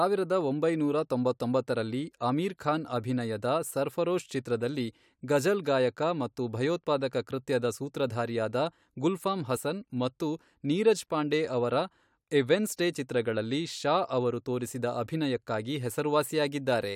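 At 9.56 s the speech jumps forward very slightly. These are compressed frames skipped: a single damaged or missing frame, which fits a 23.2 ms codec frame, was dropped, cutting roughly 20 ms of audio.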